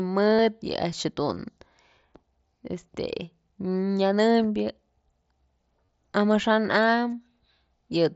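At 0.35 to 0.39 s and again at 5.86 to 5.89 s, concealed Bluetooth headset packet loss shows up as a brief buzzy, steady tone held at full level. The receiver filled each gap, 45 ms and 30 ms long, by repeating the best-matching recent stretch of waveform, and a slight warble follows as real audio resumes. A single 7.5 ms loss at 4.40 s is almost inaudible, and a longer 15 ms loss follows at 7.12 s. The mSBC link's light grain shows on loud sounds.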